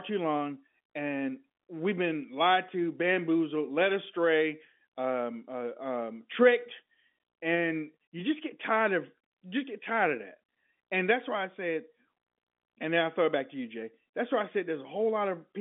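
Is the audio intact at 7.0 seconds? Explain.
Yes, the audio at 7.0 seconds is intact, carrying the narrow telephone band of G.711 coding with nothing above about 3.8 kHz and no fault at that moment.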